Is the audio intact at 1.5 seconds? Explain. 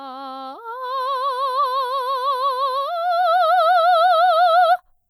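Yes, the music plays through 1.5 seconds intact, with no dropout, click, distortion or other technical fault at that moment.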